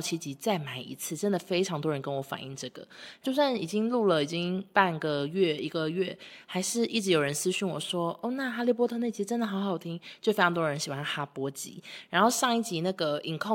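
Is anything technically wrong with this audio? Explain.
No, nothing technically wrong turns up anywhere in this speech recording, so there's nothing here that needs fixing.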